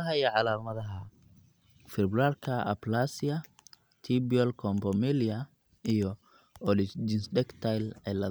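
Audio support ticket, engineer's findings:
Listened through the full speech recording and nothing stood out as a fault.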